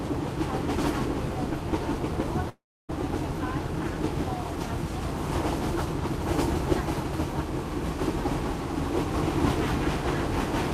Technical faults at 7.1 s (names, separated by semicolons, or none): none